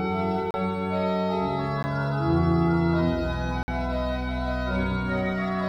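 Three times the audio path dropped a run of samples and left zeros in their place, a block of digital silence with no fade in or out. At 0.51 to 0.54 s the hole lasts about 33 ms and is heard as a short gap. At 1.83 s a 13 ms block comes across as a single tick. At 3.63 to 3.68 s a 50 ms block opens a short hole with hard edges.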